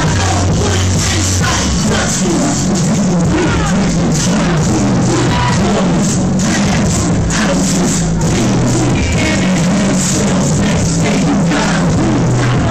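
Nothing here trips the ear at all; the sound just runs along without a single hiccup worth pointing to.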